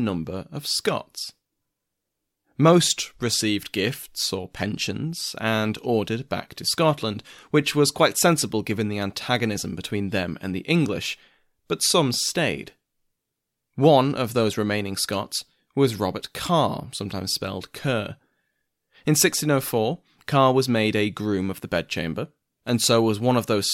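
No technical faults are audible anywhere in the speech recording.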